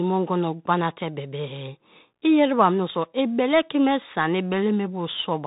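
Throughout, the speech has passed through a Bluetooth CVSD headset codec, which fits a 64 kbps link coding one up-or-down bit per sample with an adapting step. Nothing above 4 kHz survives, s sounds come out scratchy, loud bright moments distort, and a granular hiss sits underneath.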